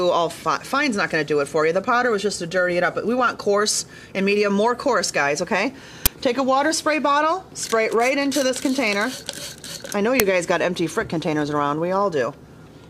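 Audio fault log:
6.06 s and 10.20 s, uninitialised buffer: two sudden, loud bursts of digital noise, about 11 ms and 3 ms long, which fit 512- and 128-sample blocks played before audio was written, so leftover memory was heard. A dropout would leave silence, not garbage.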